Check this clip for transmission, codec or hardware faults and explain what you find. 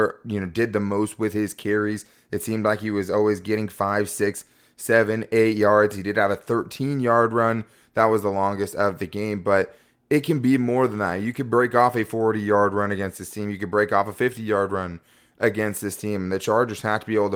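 Nothing turned up in this speech recording worth flagging, so there's nothing here to explain.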